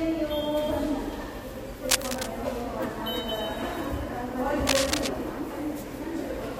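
Cable scratch noise appears twice, from 1.89 to 2.27 s and again from 4.67 to 5.08 s, each burst lasting roughly 0.4 s. Both times a dense, ragged rustling sits over the sound at about the same loudness as the sound itself. The likely cause is a worn cable, connector or control being moved, its contact resistance jumping rapidly and injecting uneven bursts of noise into the signal.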